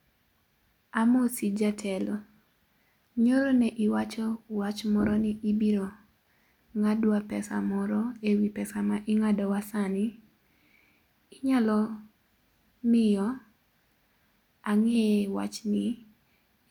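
No technical faults can be heard anywhere in this speech recording. Nothing in the audio calls for a time mark or further comment.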